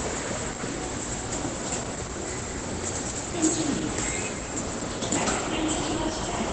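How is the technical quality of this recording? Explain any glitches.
The recording is heavily compressed, and the damage runs through the whole clip. It sounds muffled and hoarse from start to finish, with the top of the spectrum cut away. This is likely Opus compression at a very low rate, around 12 kbps, with the encoder in its speech-oriented SILK mode at wideband, so little survives above about 8 kHz. That mode models sound as if it were a voice, which is why non-speech material turns hoarse. It differs from MP3 damage because there is no swirling or warbling from bands flickering in and out. It also differs from a simple low-pass filter, because the remaining sound is hoarse rather than just dull.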